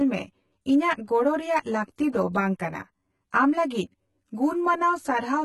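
From start to finish, one channel of this speech reaches the mono sum about 10 ms behind the other. Summing the two copies cancels whatever they share at evenly spaced frequencies, starting near 50 Hz and repeating every 100 Hz or so above that. The result is a fixed channel delay (comb filtering): a hollow, phasey colour, and it stays constant because the delay never changes.

Also throughout, the treble sounds synthesised rather than captured, most likely from heavy HE-AAC compression at a bitrate that sounds as low as about 16 kbps. At that rate the encoder keeps only the lower spectrum and fakes the top by copying lower bands upward under a coarse envelope, so the recreated harmonics don't line up with the real ones. The s sounds come out gritty and metallic, and nothing is present above 11.8 kHz.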